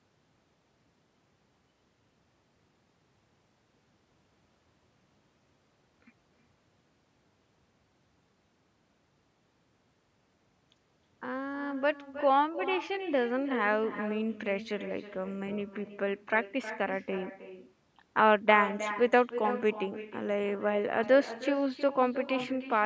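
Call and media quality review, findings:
Echo with no canceller, throughout the speech. Every phrase is shadowed by a thinner copy about 12 dB down, roughly 300 ms late. The far-end loudspeaker feeds its microphone. Nothing cancels it. The network round trip sets the delay.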